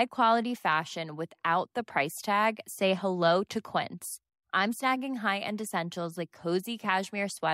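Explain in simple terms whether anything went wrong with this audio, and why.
Listening to this speech recording, nothing stood out as having gone wrong at any point.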